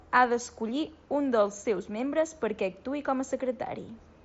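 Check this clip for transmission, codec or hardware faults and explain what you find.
No faults found here.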